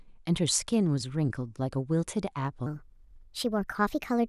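From 2.66 s to the end, the speech plays back as a section at the wrong speed, running 1.27 times too fast, likely from playback against the wrong clock. Pitch rises about four semitones and delivery sounds hurried. On a spectrogram, harmonics and formants jump upward at 2.66 s, while the waveform compresses in time.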